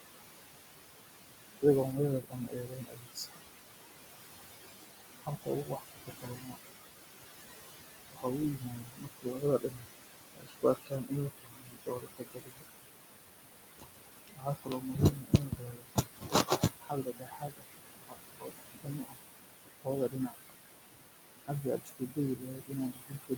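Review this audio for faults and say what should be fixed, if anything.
Noise suppressor artifacts run through the whole clip. The suppressor cuts what it judges to be steady background by about 19 dB, frame by frame. The room noise sits only about 7 dB below the speech. So the suppressor is working hard. The background drops away in pauses and swells back under the speech. Prevention: lower the suppression depth, or reduce the room noise at the microphone so less suppression is needed.

Speech cut by the noise suppressor occurs six times: 2.21 to 3.41 s, 4.94 to 6.56 s, 8.09 to 12.64 s, 13.67 to 19.2 s, 19.8 to 20.51 s, and 21.44 s to the end. The suppressor mistakes quieter parts of the speech for noise. It pulls them down by about 19 to 22 dB. Soft sounds and word endings come out swallowed or faint. The longer spans lose roughly three to four seconds of speech each. Prevention: raise the speech-to-noise ratio at the source and use a less aggressive suppressor setting that protects low-level speech.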